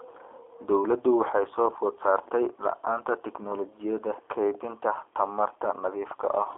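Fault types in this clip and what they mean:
G.729 codec: A low-rate telephony speech coder that discards the waveform and resynthesises each short frame from a vocal tract filter, a pitch predictor and a sparse set of excitation pulses, at a rate that fits 8 kbit/s. The clip is confined to a 200 Hz to 3.4 kHz telephone band, with nothing above 3.6 kHz, and the speech carries a plainly audible rough, synthetic texture throughout.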